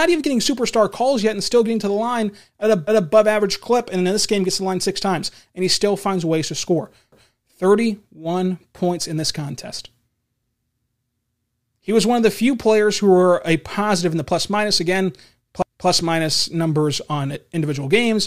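Overlapping chunks at 2.87 s after "to the line at", 7.12 s after "finds ways to score", and 15.62 s before "minus numbers on individual". Each 4 s chunk starts early, so 250 ms replays as a stutter.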